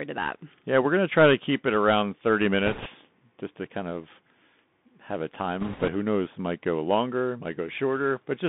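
Throughout, the speech carries the sound of a Bluetooth CVSD headset codec. It is confined to roughly 150 Hz to 3.6 kHz, which fits a 64 kbps CVSD stream. CVSD sends one bit per sample, each bit saying only whether the signal should step up or down, and the step size adapts to the signal. Fast, loud high content outruns that step, so s sounds turn scratchy and a grainy hiss sits under the voice. On a spectrogram, energy stops abruptly near 3.6 kHz, and a fine noise floor fills the band between syllables.

From 2.66 to 2.88 s, just before "just to kind of", bit errors on a Bluetooth voice link add a rushing, crackly texture. Roughly one bit in twenty arrives flipped. Each bit is only a small step and the codec recovers quickly, so there are no sharp clicks, just a burst of spread noise. On a spectrogram this shows as a broadband smear across the band, and the waveform looks fuzzed rather than spiked.

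From 5.60 to 5.89 s, between "have a" and "who knows", the same bit-error fault returns with a higher error rate, around seven percent. The crackle is heavier and denser, and it lasts slightly longer. It appears as a thicker noise patch on the spectrogram.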